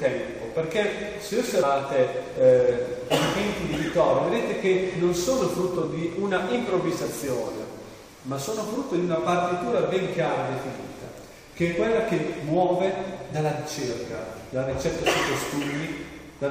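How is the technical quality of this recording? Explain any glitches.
Two brief glitches come from damaged data in a compressed stream, at 1.61 s and from 8.07 to 8.09 s. Corrupted bytes make the decoder misread frames and lose sync, leaving a short glitch.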